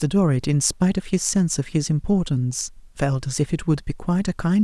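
Nothing in this bit of speech stands out as a technical fault; it just runs along without anything going wrong in the audio.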